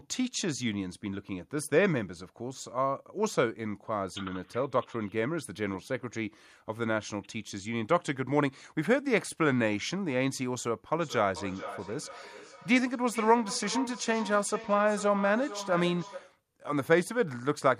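From 10.93 s to 16.41 s the speech picks up a feedback echo between two devices. A second device in the same room plays back what this microphone sent, and the microphone captures it again. Its echo canceller cannot remove sound it did not play itself. Each stretch of speech returns at a fixed delay of roughly 0.4 s, at its loudest about 12 dB below the direct speech. On a spectrogram, fainter copies of the speech patterns trail each original by that interval, and the waveform shows smaller repeated envelopes after each burst.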